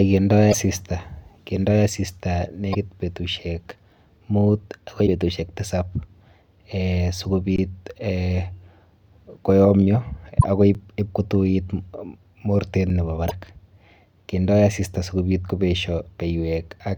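At 0.49–0.54, 2.71–2.75 and 5.03–5.09 s, damaged data in a compressed stream makes the decoder lose sync and skip ahead, giving brief glitches that appear as smeared broadband patches on a spectrogram. At 7.56–7.58 s, an underrun with held sample flattens the waveform for 21.6 ms, and roughly 20 ms of audio was lost. Another corruption glitch follows at 10.39–10.44 s. Two shorter underruns of 5.8 ms, which fits a 256-sample buffer, hit at 10.74 and 12.90 s, each a brief flat hold. A final corruption glitch lands at 13.26–13.32 s.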